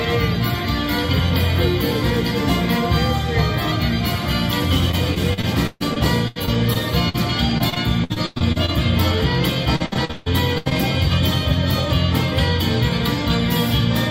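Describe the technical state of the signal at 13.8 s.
Nothing is wrong with the signal at 13.8 s: the audio is intact at that moment.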